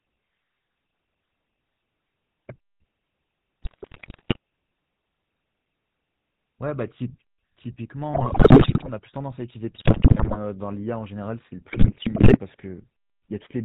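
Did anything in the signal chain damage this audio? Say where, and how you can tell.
Yes. GSM full-rate codec, throughout: buzzy, gravelly speech with nothing above 4 kHz, as the codec resynthesises the voice from a vocal-tract filter and coarse pulse excitation.

GSM bit errors at 3.62–4.37, 8.14–8.9, 9.76–10.37 and 11.68–12.39 s: squawks, pops and gargling, from corrupted filter, pitch and gain values reaching the decoder over the radio link.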